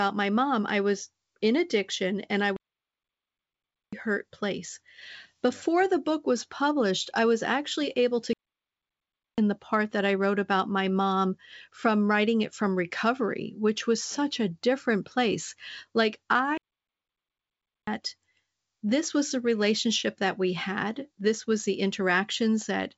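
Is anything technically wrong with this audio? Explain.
Yes. The speech stops dead three times in playback stalls. From 2.56 to 3.93 s it halts for about 1.36 s after "in addiction and I", then resumes with "hurt place". From 8.33 to 9.38 s it goes silent for about 1.05 s after "was actually able to", returning with "the part that I". From 16.58 to 17.87 s it drops out for about 1.30 s. The likely cause is the player running short of data or its thread being blocked, so output falls silent until it catches up. Underneath, the audio carries G.722 wideband telephone coding at 64 kbit/s, with nothing above about 7.7 kHz and little or no coding damage.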